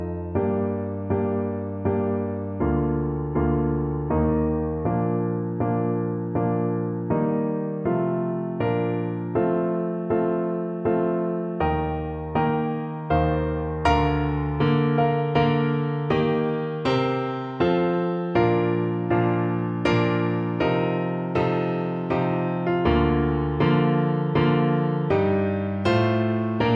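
No technical faults can be heard anywhere in this recording. The sound continues without any audible fault from the first moment to the last.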